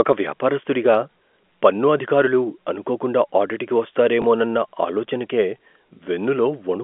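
At 4.22 to 4.24 s, just after "పన్ను అధికారులు అనుకోకుండా ఆడిట్కి", there is packet loss with the last packet repeated. A 20 ms gap, consistent with a single lost packet, was filled by replaying the previous audio, giving a small blip over the band-limited telephone sound.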